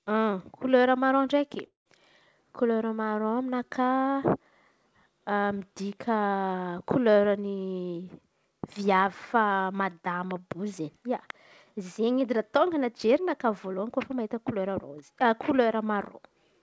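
At 1.66 s, just after "maraon ndraiky", a likely long network dropout stops audio arriving for about 200 ms. The receiver stretches the last sound into a fading buzz that sinks to near-silence, and the speech resumes at 1.87 s without the lost portion.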